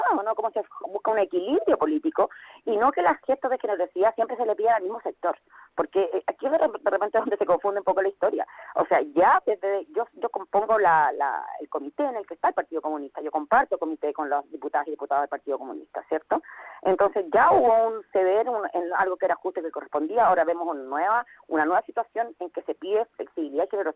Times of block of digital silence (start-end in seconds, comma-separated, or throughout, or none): none